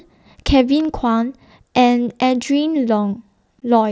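At 0.80 to 0.85 s a loose connector crackle: a worn contact briefly makes and breaks, giving an irregular scratchy burst rather than clean, evenly edged gaps. At 3.60 s unconcealed Bluetooth headset packet loss leaves a roughly 15 ms hole with abrupt edges, which fits two lost headset frames.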